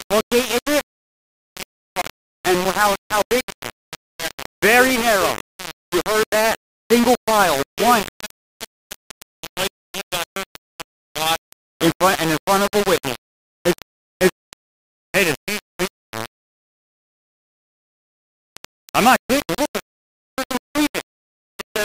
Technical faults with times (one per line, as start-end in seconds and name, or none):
0.00-21.84 low bit depth without dither